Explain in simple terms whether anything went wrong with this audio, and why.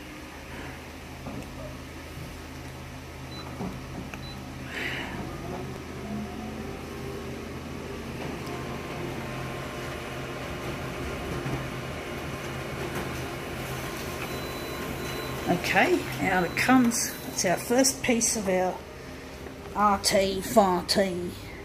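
A loud pop occurs at 5.76 to 5.79 s: a single sharp crack, much louder than the surrounding audio, lasting only a few hundredths of a second while the sound carries on underneath. It was likely caused by a sudden electrical jolt, such as a cable being plugged in, a switch flicking, a static spark or a brief glitch in the audio hardware. That jolt gets added straight onto the recording, so it stands out as a burst on top.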